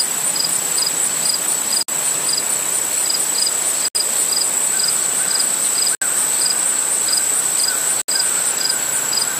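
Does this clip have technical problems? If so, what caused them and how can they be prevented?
Yes. The sound drops out abruptly four times, at 1.83 to 1.88 s (55 ms), 3.88 to 3.95 s, 5.95 to 6.02 s and 8.02 to 8.08 s (67 ms each), roughly every 2 seconds, then resumes exactly where it left off. These are gaps at joins of encoded pieces: each chunk was encoded on its own, and the encoder's startup delay and last-frame padding were left in, leaving silence at every seam. To prevent this, encode the audio as one continuous stream, or trim each piece's encoder delay and padding before joining.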